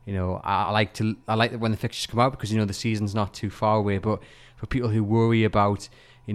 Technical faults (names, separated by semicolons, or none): none